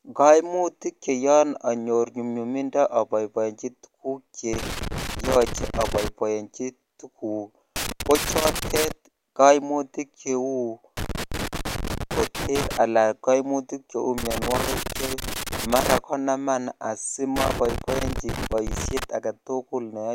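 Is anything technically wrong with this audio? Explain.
Yes, there's loose connector crackle on this speech, in five separate bursts: 4.53 to 6.08 s, 7.76 to 8.92 s, 10.97 to 12.77 s, 14.18 to 15.98 s, and 17.36 to 19.04 s. A worn or dirty contact keeps dropping in and out as the plug moves, so the signal gets chopped into fragments, and any DC on the line snaps into pops at each break. That's the ragged, uneven scratching you hear through each stretch.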